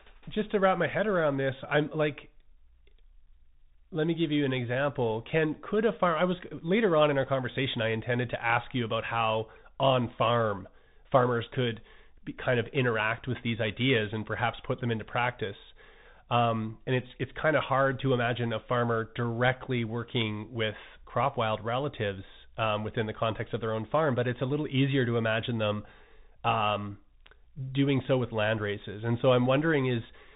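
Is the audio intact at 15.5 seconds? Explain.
No. At 15.5 seconds, as throughout the clip, the speech sounds narrow and muffled, with nothing above about 3.8 kHz, scratchy s sounds, rough distortion on loud bright moments and a granular hiss underneath. This is Bluetooth CVSD headset codec damage. Each sample is sent as a single up-or-down bit, which fits a 64 kbps stream, while the step size adapts. Fast, loud high-frequency movement outruns that step, and the constant stepping leaves the grainy noise.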